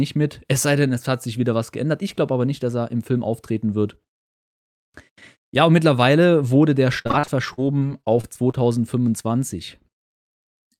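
After "und mittlerweile wurde der", 7.01 to 8.55 s shows repeated packet loss (robotic sound): recurring gaps up to 43 ms, patched by extending prior sound, conceal about 18% of the stretch, making it choppy.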